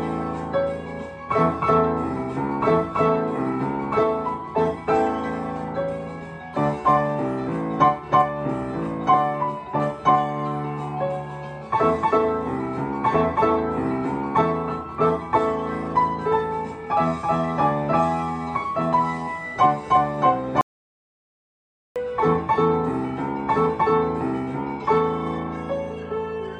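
At 20.61 s the input feeding the recorder was likely cut off, perhaps by a disconnected device, a dropped link or a mute, while the recording carried on writing silence. The result is an audio dropout to silence lasting 1.35 s, until 21.96 s. The sound stops abruptly mid-flow and the gap is dead silence with no room tone at all. Whatever happened during that stretch is lost, and the sound resumes just as suddenly.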